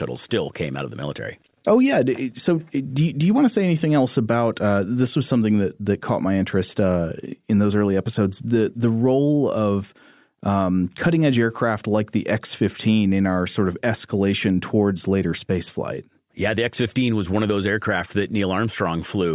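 No technical faults can be heard anywhere in the speech recording, and the signal stays continuous and steady throughout.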